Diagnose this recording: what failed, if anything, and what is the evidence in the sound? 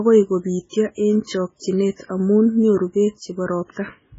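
Codec stage, all the way through. The speech sounds watery and swirly, there's nothing at all above 7.6 kHz, and sibilants turn metallic. That's likely MP3 compression starved of bits, which fits something around 16 kbps. The encoder chops the treble and lets weak frequency lines flicker on and off between frames.

There's also pre-echo from 1.57 to 1.62 s: roughly 49 ms of hiss creeps in just before "amu nyuru beek", and the onset sounds smeared. The codec spread its quantisation noise across the whole block, so noise sized for that loud attack spills into the quiet gap ahead of it.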